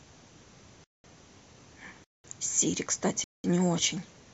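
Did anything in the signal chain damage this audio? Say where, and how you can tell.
Yes, a gap between chunks at the playback or storage stage: 200 ms hard-edged silences at 0.84–1.04 s, 2.04–2.24 s and 3.24–3.44 s, spaced 1.2 s apart. Unlike packet loss, the speech resumes exactly where it stopped, so silence was inserted rather than audio removed.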